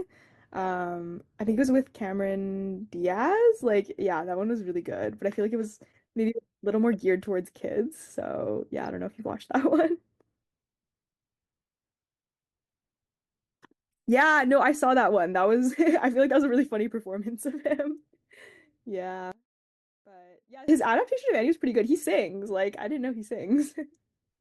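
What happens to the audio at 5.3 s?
Nothing goes wrong at 5.3 s; the speech carries straight through that moment intact, with no dropout, click or distortion.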